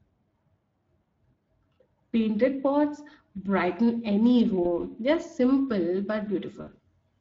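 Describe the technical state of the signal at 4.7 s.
VoIP packet loss concealed by the speech codec, 4.63 to 4.73 s: the decoder covers a gap that fits a single lost 20 ms frame by extrapolating its last pitch and filter at falling gain. The result is a brief fading smear, and the voice stays weak or distorted for tens of milliseconds after about 4.73 s while the decoder's state recovers.

Pre-emphasis left on, from 3.38 s to the end: the treble boost used for recording or transmission was never undone by a matching de-emphasis, leaving 10 kHz about 8 dB hotter than 1 kHz, along a curve like the CD 50/15 µs one. The speech sounds thin, bright and sibilant.

Speex codec, across the whole clip: the damage is plainly audible across the speech. The quality is consistent with a bitrate around 20 kbps, and it colours the concealed gap at 4.7 s as well.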